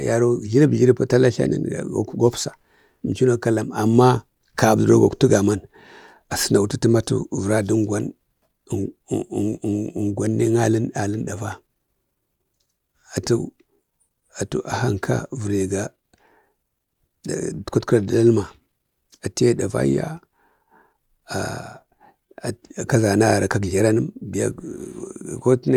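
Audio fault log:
There is no fault in this audio.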